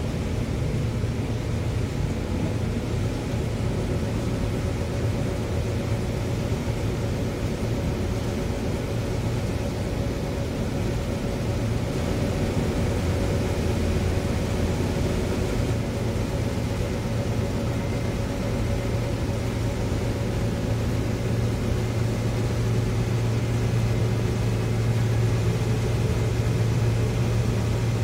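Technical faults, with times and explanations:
11.93–15.73 s, doubled audio track: an equally loud, dry copy trails roughly 200 ms behind, likely from a second, slower capture path, and it starts and stops abruptly.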